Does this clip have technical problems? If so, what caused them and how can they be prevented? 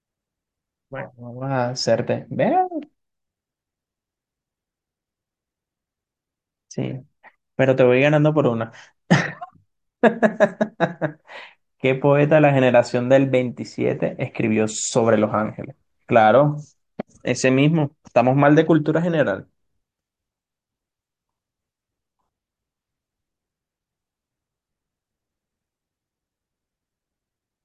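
No, nothing in this speech recording stood out as a technical problem on listening, so there is nothing here to trace to a cause or prevent.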